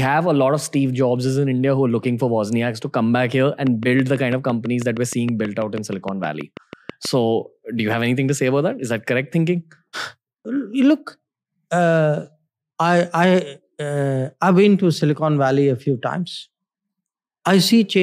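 After "to come back here", from 3.67 to 7.06 s, a train of clicks ticks steadily at 6.2 per second, likely from interference, a faulty connection or a power supply. It appears as evenly spaced vertical stripes.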